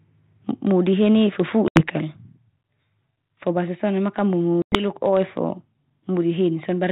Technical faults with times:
1.68-1.81 packet loss on an ADPCM call
4.62-4.85 packet loss on an ADPCM call

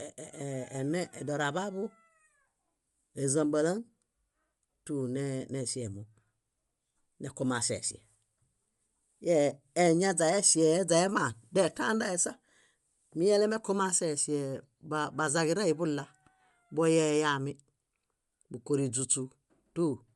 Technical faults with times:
0.00-20.15 Bluetooth LC3 compression

